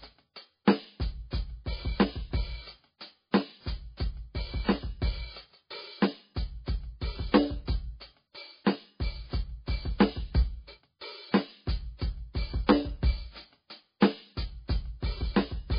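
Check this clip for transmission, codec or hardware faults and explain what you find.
The music carries heavy MP3 compression damage from start to finish. Nothing survives above 5 kHz, and beneath that cutoff the sound turns watery and swirly, with metallic chirps and smeared attacks. The likely cause is an MP3 encoder starved of bits, consistent with a very low bitrate near 18 kbps. It drops the treble outright and zeroes weak frequency lines, which flicker on and off between frames. A plain low-pass filter would dull the top just as much but leave what remains clean, without that shifting, bubbling texture.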